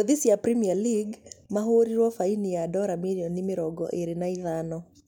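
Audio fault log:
No fault is heard in this speech clip.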